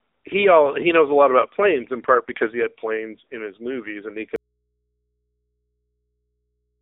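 From the start, the speech carries the sound of an AMR narrowband mobile codec. Nothing passes above 3.7 kHz, and the band sits between 300 Hz and 3.7 kHz. The damage is plainly audible: a buzzy, synthetic edge that points to a low-rate mode near 8 kbps.

At 4.36 s, just after "his movies and he", an audio dropout leaves only a faint residue. The signal cuts out abruptly and never returns. Only mains hum remains, roughly 55 dB down. This is likely a lost input while the path after it stayed live.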